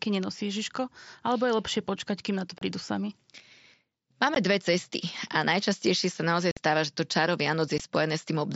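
Short, hard-edged holes cut into the speech at 2.59 to 2.62 s (30 ms), at 4.35 s, at 6.51 to 6.57 s (about 52 ms, the longest) and at 7.78 s. This is unconcealed Bluetooth headset packet loss. Voice packets between headset and phone went missing on the wideband mSBC link, and silence or an idle pattern filled their place instead of any smoothing over.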